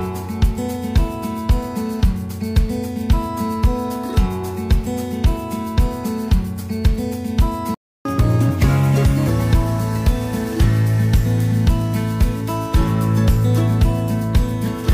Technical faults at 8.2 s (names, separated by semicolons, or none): catch-up at higher speed